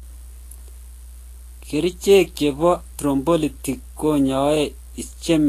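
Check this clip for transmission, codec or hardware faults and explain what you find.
Two faults run through the whole speech clip: a steady mains hum and plainly audible lossy-codec damage.

Mains hum sits under the entire clip as a constant 60 Hz tone, about 20 dB below the speech. A ground loop or nearby transformer is leaking the power line into the signal. Unlike rumble or wind noise, it holds one fixed pitch and never varies with the speech.

Vorbis compression is the likely cause of the grainy, hissy texture throughout. Nothing is present above 14.1 kHz, and the treble is so coarsely quantised that detail turns into noise. This fits a low bitrate around 34 kbps. Unlike broadband hiss, this noise moves with the speech itself, roughening tones and smearing consonant attacks.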